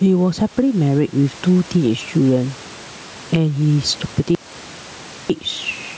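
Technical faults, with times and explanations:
Throughout, gain pumping. The level breathes with the speech, with a gain swing of around 10 dB. The likely cause is gain set far too high, with a fast limiter clamping each loud syllable.
4.35 to 5.30 s, audio dropout to silence. The speech cuts out abruptly for about 0.95 s. The gap is dead silent, with no room tone. The input was likely lost while the recorder kept writing silence, so that speech is gone.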